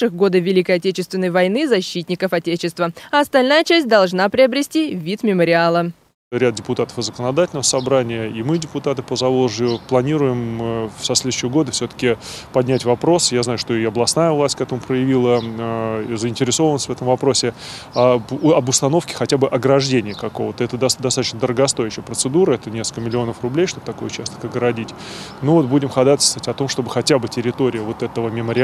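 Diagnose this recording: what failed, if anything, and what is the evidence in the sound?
A short click recurs at a steady 3.46 s spacing from 0.63 s to 28.29 s, about ten in all, each a tiny discontinuity rather than a gap. That regularity points to the driver or buffer stage, most likely clock drift buffer slips. Two devices on independent clocks differ by something around 50 ppm, so the buffer between them drifts until a handful of samples is dropped or repeated. Network packet loss or dropouts would land irregularly and leave audible holes.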